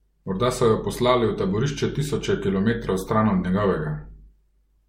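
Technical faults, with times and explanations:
Throughout, generation loss: swirly, smeared, hollow speech with blurred attacks, nothing above 16.5 kHz, likely from about four MP3 passes near 64 kbit/s.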